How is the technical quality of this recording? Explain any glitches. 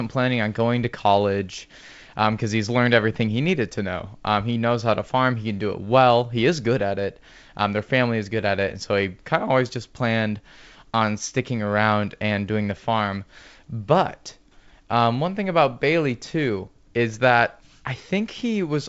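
No glitches to explain here.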